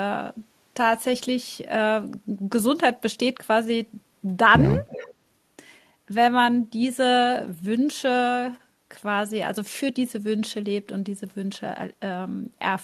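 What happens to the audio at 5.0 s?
Around 5.0 s, from 4.87 to 5.14 s, there is an echo leak: a faint copy of the speech returns about 341 ms late, roughly 15 dB below the direct voice. It is likely from a far-end loudspeaker whose echo canceller let part of the microphone pickup through and back down the line. On a spectrogram, the harmonic stripes reappear as a weaker, time-shifted ghost.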